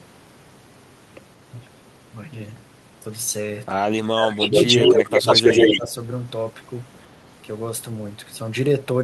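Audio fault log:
4.11–4.53 s, speech suppressed in double talk: The speech dips by as much as about 15 dB for roughly 0.4 s. Both ends were talking together. The echo canceller likely could not tell near speech from loudspeaker echo, so it turned everything down.
4.42–5.79 s, echo leak: A delayed copy of the speech trails the original by 138 ms. It is strong, about 5 dB above the direct speech. The far end likely plays the call on a loudspeaker, and its echo canceller let that pickup return.
5.21–5.25 s and 5.67–5.93 s, speech suppressed in double talk: Two shallower dips of about 5 dB follow, one brief and one near 0.3 s. They fall inside and just after the leaking echo. The canceller likely mistook overlapping sound for echo and attenuated it.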